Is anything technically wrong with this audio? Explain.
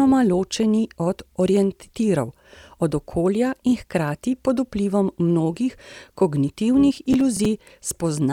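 Yes. From 6.96 to 7.45 s the speech carries processor overload crackle: the processor misses its deadlines on short buffers of around 10 ms, roughly ten times in quick succession, and each miss replays stale audio with hard edges, producing a gritty tearing burst.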